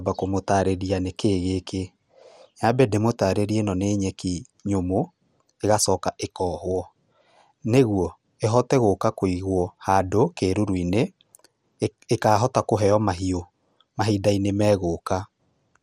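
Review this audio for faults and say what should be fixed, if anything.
Throughout the speech the sound is dulled and carries a gurgling, granular roughness, with nothing present above 15.8 kHz. The likely cause is MP2 compression at a starved bitrate, which fits around 80 kbps. Layer II divides the spectrum into 32 sub-bands and shares out bits among them, so upper bands drop out and flicker while the rest are coarsely quantised. Prevent it by encoding at a higher bitrate or using a more efficient codec.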